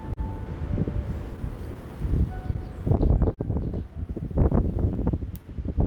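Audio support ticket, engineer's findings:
Faint recurring timing hiccups throughout the everyday sounds. Clock drift between sender and receiver: sender clock running roughly 3% slow, so the jitter buffer keeps draining and the receiver pads with repeated fragments to keep playback going.

Sound briefly held with a slight buzz or dip, 0.13 to 0.19 s and 3.34 to 3.40 s. Short stall from a late packet: buffer ran dry, about 30 ms and 32 ms stretched, nothing lost, resumed in place.

Slightly dragging, 1.51 to 5.83 s. Repeated timing corrections: receiver inserting small repeats at uneven spacing, playback near 99% speed, around 40 ms added overall, compensating for the slow sender clock.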